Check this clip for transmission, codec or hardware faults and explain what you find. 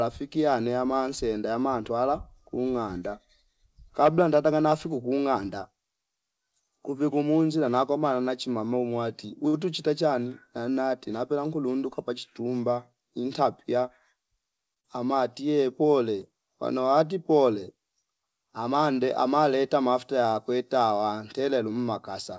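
Three kinds of transmission fault show up, all in the jitter-buffer and packet-delivery stage of the call. The sound passes through a wideband call codec, which fits G.722 at 64 kbps, with nothing above 8 kHz.

Short stall from a late packet, at 9.48 to 9.56 s and again at 14.74 to 14.79 s. Each time a packet missed its playout slot and the jitter buffer ran dry. The receiver held the last sound, for 53 ms in the first case and 25 ms in the second, until the packet arrived, then resumed from the same point. Nothing is lost, but a sound hangs slightly too long with a faint buzz or dip.

Jitter buffer speed-up, from 13.20 to 13.83 s. The buffer had built up more audio than its target, so the receiver trimmed pitch-period-sized slices repeatedly, about 40 ms in total. Playback runs roughly 5% fast across that stretch while the pitch stays unchanged. The speech sounds briefly hurried, without a chipmunk effect.

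Short concealed packet loss, at 14.80 to 14.87 s, right on the heels of the second stall. About 40 ms of audio never reached the decoder in time, and the receiver covered 32 ms of it by extending the preceding sound before crossfading back into real audio. The result is a quick smear or wobble, and a brief sound inside that window can disappear.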